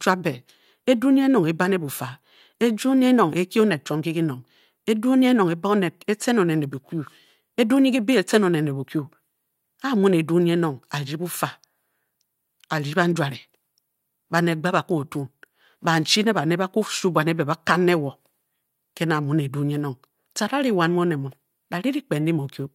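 Nothing in the recording stood out as a technical problem on listening.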